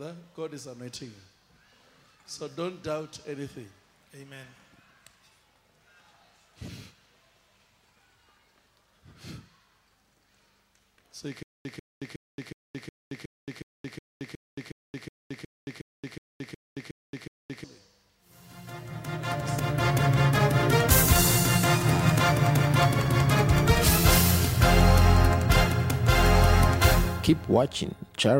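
From 11.43 to 17.64 s, a stutter with silent gaps: a 143 ms burst repeats 17 times every 365 ms with 222 ms of silence between, likely a stalled stream replaying its last fragment.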